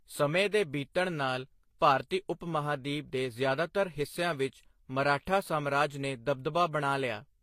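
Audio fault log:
Throughout: transcoding between lossy codecs. The speech has nothing above 16.1 kHz, and the artefacts of two lossy codecs are heard together. The likely cause is a low-rate HE-AAC encode, around 32 kbit/s, later re-encoded to Vorbis near 44 kbit/s. Vorbis spent bits copying the earlier damage while adding its own, and the lower cut-off survived.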